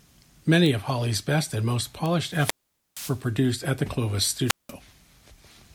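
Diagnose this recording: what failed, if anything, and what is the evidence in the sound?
Two isolated, sharp ticks at 0.66 s and 2.06 s, the second just after "best and most", each a single sample reaching about -12 dBFS and unrelated to the speech around it. These are bit error spikes: one flipped bit in storage or on a digital link throws one sample by a power of two before it snaps back.

Hiss swells, then the speech drops into near silence twice: from 2.25 to 3.25 s, after "best and most" and returning at "at the", with about 464 ms fully muted, and from 4.46 to 4.72 s, muted for about 186 ms. This is wireless microphone squelch dropout at the analogue radio stage, where the FM signal faded until the receiver's squelch cut the output.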